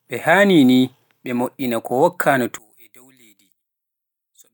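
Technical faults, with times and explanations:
2.58–4.54 s, one channel inverted: speech falls about 29 dB to a faint residue, likely reversed polarity in one channel cancelling the shared centre when summed to mono.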